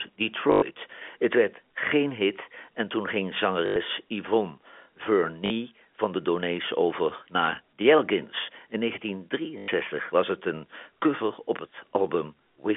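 At 0.52 to 0.62 s the speech breaks into a short robotic stutter. It happens again at 3.66 to 3.76 s, 5.46 to 5.50 s and 9.58 to 9.68 s. This is packet loss with the last packet repeated. The receiver loops one chunk of audio across each gap. The loops do not align with the pitch. The gaps last 100 ms, or 40 ms for the third one. They buzz at about 50 Hz, which fits 20 ms packets. The narrow G.711 telephone band can be heard throughout.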